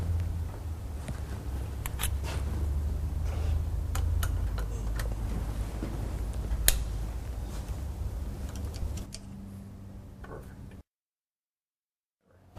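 A phantom power thump at 8.82 to 8.88 s: supply switching on a live input sends a step through the coupling capacitors, giving a deep thump peaking around -25 dBFS that decays within 13 ms.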